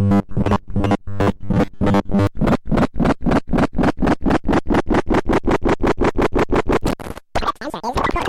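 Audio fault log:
0.01 to 2.27 s, robotic sound from repeated short buffers: the sound takes on a rigid, metallic 100 Hz buzz. It is likely caused by late-arriving audio being covered by looping the last 10 ms over and over, replacing most of the real signal.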